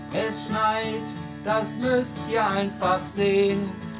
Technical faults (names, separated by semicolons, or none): none